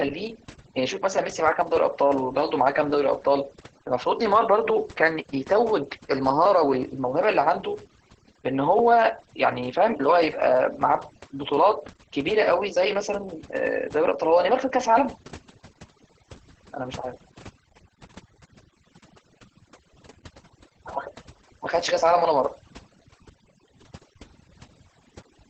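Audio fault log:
Throughout: overdone noise removal. The background has dropped and broken up into twinkling specks where noise once sat. A noise reducer set far too strong is cutting individual frequency bands whenever they drift near its noise estimate. Quiet parts of the speech fall below that line and get removed too. Those bands blink on and off from moment to moment. That leaves the speech with its softer detail gone.
Throughout: Opus voice compression. The speech is muffled, hoarse and faintly robotic. Nothing is present above 8.8 kHz, so the top of the spectrum is missing. The sound fits Opus in its SILK speech mode, narrowed to wideband and running at a low bitrate, around 10 kbps. At that rate the excitation is coded coarsely, which brings the rough, buzzy texture. The damage is heavy and constant across the speech.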